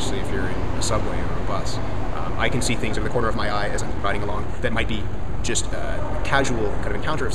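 At 2.91 s the pace suddenly jumps and stays that way to the end: a time-stretched section, running about 1.61 times faster with the pitch unchanged. It sounds rushed, likely from software squeezing the audio by dropping short slices to fit a shorter length.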